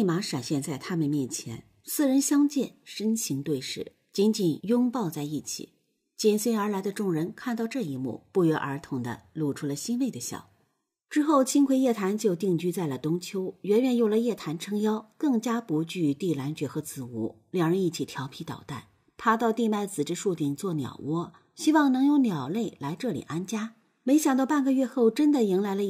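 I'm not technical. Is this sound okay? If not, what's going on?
Yes, nothing stood out as a problem when listening to this sound.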